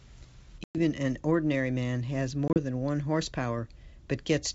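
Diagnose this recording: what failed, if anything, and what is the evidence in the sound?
Network-side packet loss on an ADPCM call, riding a G.722 wideband link at 64 kbit/s. There's a hard-edged silent hole of about 110 ms at 0.64–0.76 s, then a scattered 50 ms of gaps across 2.48–2.58 s, the longest 30 ms. Each time, the decoder's predictor and step size drift out of step with the sender's, so speech re-enters slightly distorted before settling.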